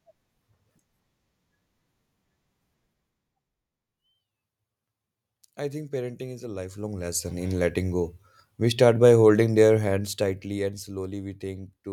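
The gain is being changed in unsmoothed 1 dB steps, producing zipper noise: from 6.56 to 7.34 s, after "think parenting is a", the level climbs about 10 dB in roughly fifteen clicks a second; from 9.72 to 10.94 s, after "start by holding", it drops about 10 dB with slower ticking.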